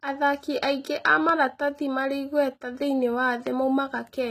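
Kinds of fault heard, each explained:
HE-AAC compression: The speech carries plainly audible codec damage. The treble sounds synthetic rather than natural, with s sounds and other hiss-like detail coming across gritty or lispy, and nothing reaches above 14.9 kHz. This is likely HE-AAC at a low bitrate, around 20 kbps. At that rate the encoder keeps only the lower spectrum and fills in the top by copying lower bands upward under a coarse envelope, so the upper harmonics no longer match the real ones.
Loud pop: Two separate clicks cut in on top of the speech, each a single sharp pop or thump about 10 dB above the surrounding level. The first falls at 1.29 to 1.31 s and the second at 3.47 to 3.49 s, and each lasts about 20 ms. The speech carries on underneath both. The likely cause is a sudden voltage step or pulse entering the signal path, such as from a connector, a switch, static discharge or a driver glitch.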